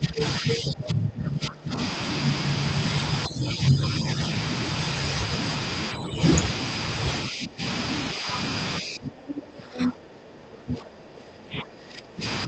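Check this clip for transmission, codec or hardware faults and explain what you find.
Two faults stand out in this speech clip, both tied to echo control on a call whose audio tops out around 8 kHz, which fits a modest-bitrate Opus link.

Speech suppressed in double talk: the talker dips and breaks up at 0 to 1.78 s (about 1.5 s affected, falling by roughly 20 dB), 3.27 to 4.21 s (about 10 dB), 5.92 to 6.24 s (about 10 dB), 7.29 to 7.62 s (about 15 dB), and from 8.81 s to the end (roughly 20 dB). The likely cause is an echo canceller that, with both sides talking, couldn't tell the talker from loudspeaker echo and attenuated everything.

Other side's voice leaking through: from 0.17 to 0.56 s a second voice sits only slightly below the talker, roughly 5 dB down. This is likely echo the canceller failed to remove, with the loudspeaker playback picked up again by the microphone.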